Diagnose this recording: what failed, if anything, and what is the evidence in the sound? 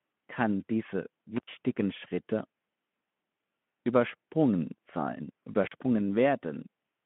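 The fault is an intermittent contact in the analogue wiring. The speech cuts out twice, at 1.36 to 1.48 s and at 5.66 to 5.73 s, with crackle on each edge. The line stays open for 89 ms, then 42 ms. A loose plug or cable briefly breaks the circuit.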